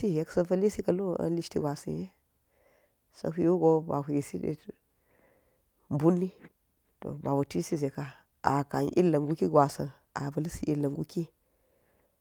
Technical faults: none

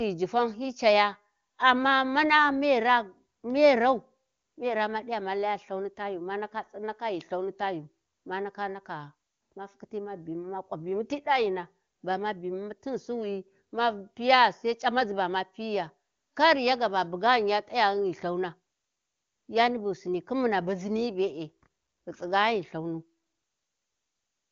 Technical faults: none

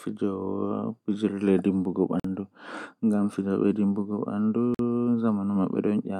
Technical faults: gap between chunks

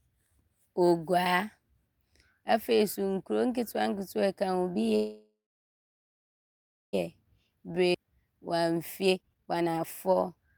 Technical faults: call audio freeze; jitter buffer speed-up; skip ahead

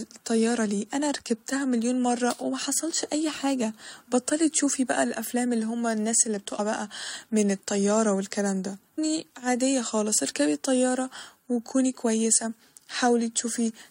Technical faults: damaged data in a compressed stream

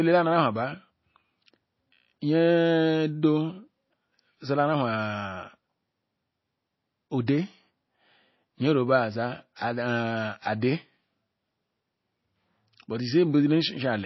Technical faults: MP3 compression; pre-echo

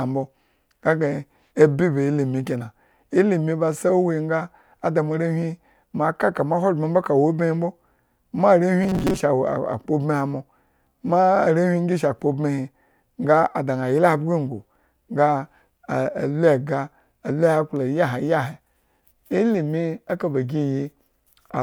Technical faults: robotic sound from repeated short buffers

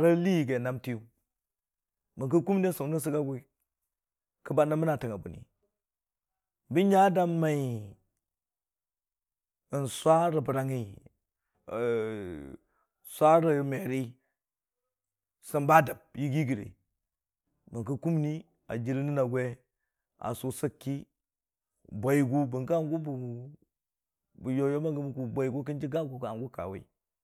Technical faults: drift correction step

